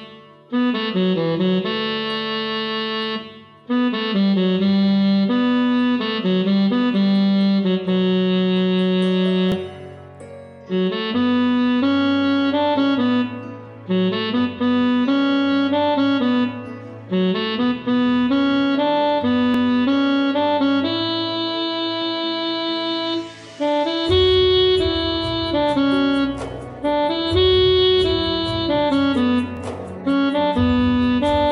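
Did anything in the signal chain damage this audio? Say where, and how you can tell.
Yes. Three brief stutters, each a tiny skip-back where about 25 ms of sound plays a second time, fall at 9.52–9.54 s, 19.54–19.57 s and 29.57–29.59 s, about 10 s apart. That strict spacing points to overlapping chunks at the buffer or block-processing stage. The audio was handled in 10-second blocks, and each block began 25 ms before the previous one ended, so every join replays that sliver.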